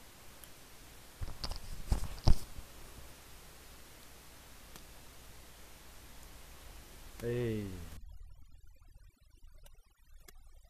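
A speech recording whose last stretch, from 7.97 s to the end at 10.70 s, suffers overdone noise removal. Before that, room noise sits about 18 dB below the speech. In this final section, a noise reducer pushed too hard cuts each frequency band it judges to be noise, so the background drops and breaks up into twinkling specks, and the softer parts of the voice are stripped away. Unlike a noise gate, which silences everything at once, the damage here happens band by band, so the artefacts sparkle rather than pump.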